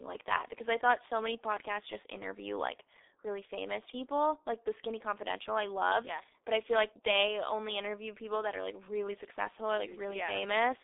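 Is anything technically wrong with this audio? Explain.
Yes. For the whole clip the speech carries the signature of the G.723.1 codec, and the sound points to its 6.3 kbit/s mode. This low-rate telephony coder works in 30 ms frames and refreshes its vocal-tract model only slowly, so rapid articulation is smeared across frames. The line band runs from about 300 Hz to 3.7 kHz, with nothing above 3.7 kHz. The result is heavily damaged, muffled, hoarse speech with blurred consonants.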